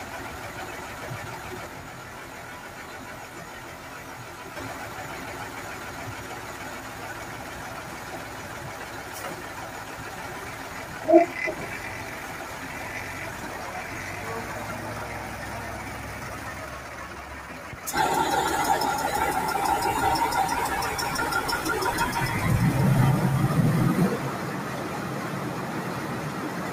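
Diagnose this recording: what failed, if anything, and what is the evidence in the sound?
Call processing: a noise suppressor applied to music or sounds runs throughout. Held tones and tails sink by around 10 dB after attacks, showing as pumping level dips on the waveform.

Driver or buffer stage: a channel delay (comb filtering) of about 20 ms from 1.67 to 4.56 s sums to mono. It sounds rough and slightly doubled, with evenly spaced spectrogram notches starting near 20 Hz.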